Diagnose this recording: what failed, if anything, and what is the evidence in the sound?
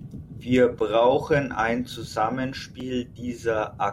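Block of digital silence at 0.79 s, 1.86 s and 2.80 s in the speech, lasting about 11.6 ms, 5.8 ms and 4.6 ms. Each is a hard dropout to silence with an abrupt edge on both sides, so each is heard as a tick or dip rather than a pause. This points to the driver or buffer stage. The two longer gaps fit a 512-sample and a 256-sample buffer that was not filled in time, leaving zeros in the output.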